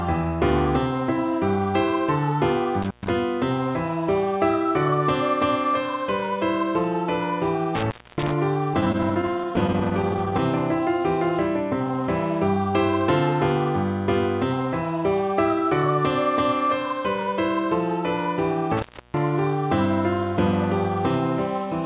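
At 2.82 to 3.10 s an intermittent contact fault opens the line for 120 ms. A loose plug or cable breaks the connection briefly, so the sound drops out with crackle at each edge and faint hiss during the gap. The same fault returns at 7.75 to 8.33 s (276 ms open) and at 18.77 to 19.17 s (316 ms open). Each is a hard break bracketed by clicks.

From 8.74 to 10.40 s there are repeated stalls (stutter). Packets arrived late, so the jitter buffer ran dry about thirty times. Each time, the receiver held the last sound for up to 18 ms, about 0.28 s in total. Nothing is lost, but the passage drags and judders. Throughout, the G.711 mu-law call path leaves nothing above 4 kHz.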